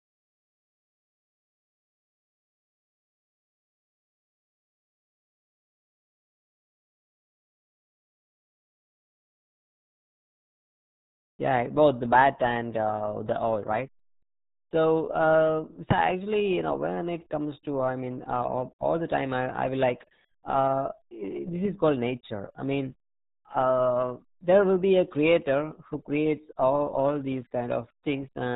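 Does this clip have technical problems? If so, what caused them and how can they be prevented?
Yes: RealAudio 14.4 codec damage runs throughout, cutting everything above 3.8 kHz and leaving speech muffled and gargly, which fits an 8 kbit/s dial-up-era encode. Prevent it by encoding with a modern wideband codec at a higher bitrate.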